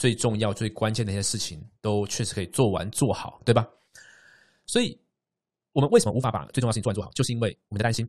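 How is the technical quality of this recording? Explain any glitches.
One fault affects the speech: a time-stretched section from 5.63 s to 8.08 s, where the pace jumps to about 1.71 times normal with unchanged pitch, sounding rushed, likely from software dropping short pieces to shorten it.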